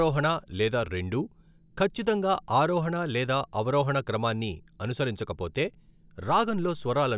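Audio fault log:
No fault is heard in this speech.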